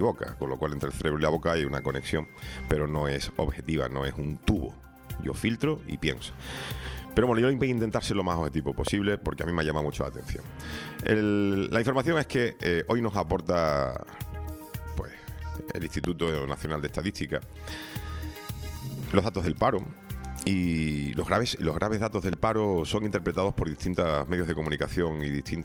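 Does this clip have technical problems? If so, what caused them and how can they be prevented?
Yes. Loud pops occur at 8.87 to 8.90 s and 22.33 to 22.35 s, with a double pop from 16.04 to 16.30 s. Each peaks roughly 15 dB above the sound, which carries on underneath. A voltage spike from a plug, switch or static discharge is the likely cause. Secure all connections and avoid switching equipment while recording.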